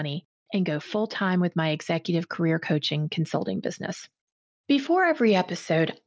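Automatic gain rising runs from 0.51 to 2.7 s: the gain control judged the incoming speech too quiet and lifted its gain by about 4 dB over roughly two seconds, so voice and background noise swell together through the band-limited mSBC headset link, which stops at 8 kHz.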